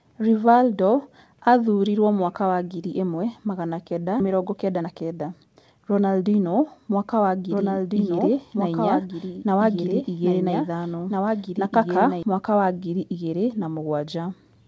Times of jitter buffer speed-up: 4.29-6.22

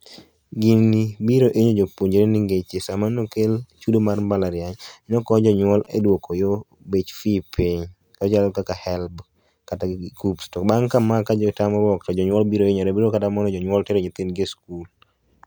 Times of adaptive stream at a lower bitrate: none

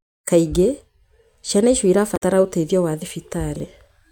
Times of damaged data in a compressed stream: 2.13-2.22

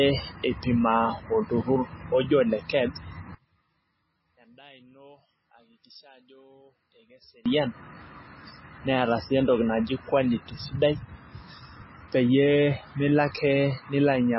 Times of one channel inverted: 3.35-7.46

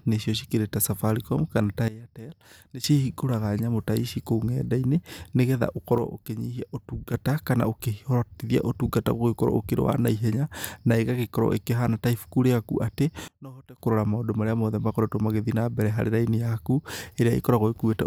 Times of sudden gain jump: 1.88-2.84, 5.98-7.14, 13.28-13.78

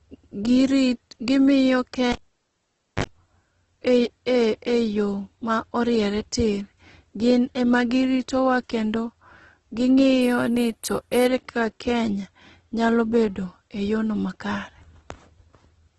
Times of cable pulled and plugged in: 2.12-3.04

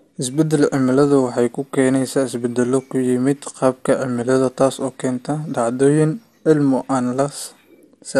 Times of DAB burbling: 3.76-3.89

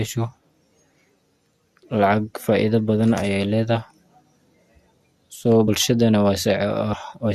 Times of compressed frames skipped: 5.67, 6.92

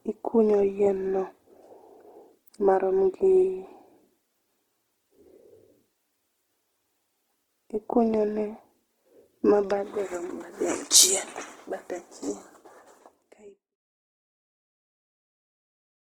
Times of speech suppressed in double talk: none

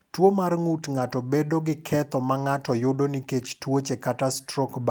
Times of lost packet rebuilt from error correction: 0.95-1.01, 3.39-3.41

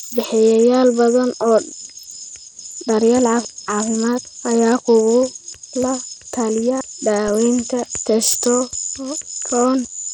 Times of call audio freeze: none

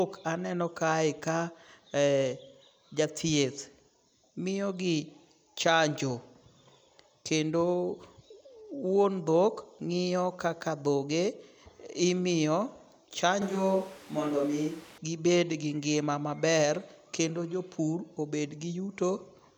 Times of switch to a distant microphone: 13.42-14.98

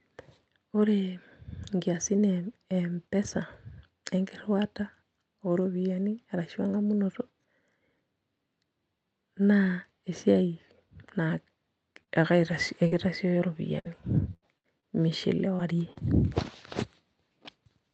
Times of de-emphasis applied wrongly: none

